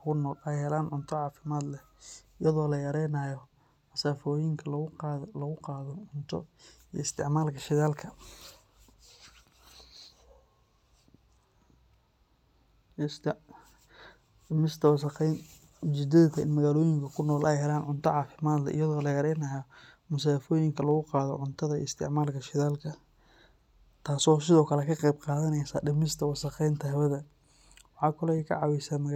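Speech runs through a fine, regular rattle of clock slip clicks from about 0.11 s to 29.14 s, the ticks arriving roughly every 40 ms and dropping away in pauses. The likely cause is two devices running on unsynchronised clocks, several hundred parts per million apart, so a single sample is dropped or repeated each time the drift reaches a whole sample. Buffer dropouts leave audible gaps at irregular moments. These clicks instead keep a steady pace and never interrupt the sound.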